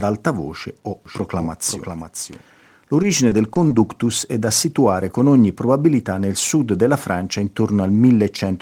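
From 1.06 to 2.42 s there's a doubled audio track. A second full-band copy of the speech sits roughly half a second behind the original, only about 5 dB quieter, so you hear everything twice in a clipped, dry echo with no room tail. It cuts in and out abruptly at both edges, which likely means the signal was picked up again through a slower path or two out-of-step copies ended up layered in an edit.

Then from 3.02 to 3.78 s you get repeated packet loss, and it sounds robotic. A handful of short holes land one after another, none longer than about 20 ms. Each one gets patched by stretching the last bit of sound, adding up to around 70 ms of rebuilt audio in that stretch. Because the patches come so close together, the speech turns choppy, with small pieces missing.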